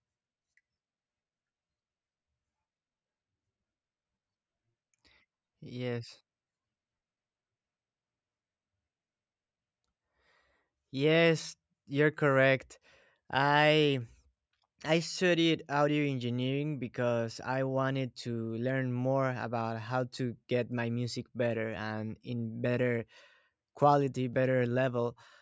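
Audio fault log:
No fault can be heard anywhere in this speech recording. Nothing in the audio calls for an entry in this log.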